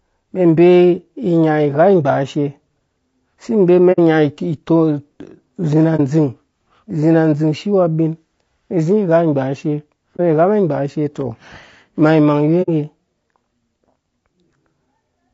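It's a speech clip, and the whole thing has a rough, grainy texture, with noise filling in between the harmonics and a top end that sounds thin and a bit synthetic. That's plainly audible, and it's most likely low-delay AAC compression at work. The short frames these call codecs use can't pin down pitch harmonics cleanly, and at this quality level the damage fits something like AAC-ELD at around 32 kbps. On top of that there's AAC frame loss with muting: four brief soft-edged dropouts at 3.92 to 3.99 s, 5.96 to 6.00 s, 10.16 to 10.20 s and 12.62 to 12.70 s. The first and last each hide about 60 ms of audio, which fits two lost frames, and the middle two hide about 30 ms each, which fits a single frame. The decoder zeroed the missing spectrum, so the overlapping windows fade the sound down and back up rather than cutting it. That's why you hear a quick gap.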